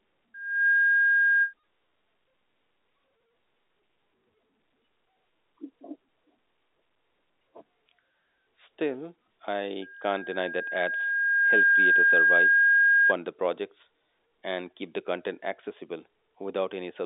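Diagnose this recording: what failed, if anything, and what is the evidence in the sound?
Loudspeaker feedback squeal, an acoustic loop between microphone and loudspeaker, appears from 0.34 to 1.54 s and again from 9.82 to 13.14 s, ending just before "the projects and keep". A 1.6 kHz tone grows to about 10 dB above the speech, swelling over roughly 0.4 s, then about two seconds. A steady interference tone would not swell like that.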